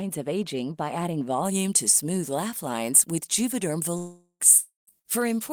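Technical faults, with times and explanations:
1.45 s to end, pre-emphasis left on: from just after "of aging by adding" the treble sits about 13 dB high at 10 kHz, matching an uncorrected 75 µs FM curve, a steady tilt rather than intermittent hiss.
3.97–4.43 s and 4.58–4.90 s, long network dropouts: the last sound is held as a fading buzz or hiss, then falls silent before the audio resumes with about 0.42 s and 0.30 s missing, likely from lost network audio. The silent tail sets these apart from short bursts.
4.99–5.07 s, burst of packet loss: roughly 60 ms is missing, bridged by a brief held buzz or hiss that fades without reaching silence before the audio resumes further on.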